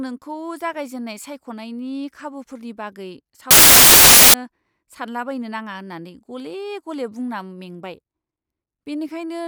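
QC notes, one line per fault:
3.51–4.34 s: samples built from the wrong bytes. For about 0.83 s the speech turns into loud, harsh broadband noise. Each sample's bytes are assembled in the wrong order or alignment. The rapidly changing low bits become the large part of every value.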